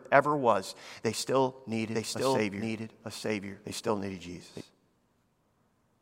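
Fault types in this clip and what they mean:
Doubled audio track, 1.95 to 4.61 s: right after "ever was they still", a second full-band copy of the speech enters about one second behind the original and at roughly the same loudness, so each phrase is heard again over whatever follows. The copy is dry, with no decay or added room sound, and it starts and stops abruptly. This is likely a second capture of the same signal through a slower path being mixed back in.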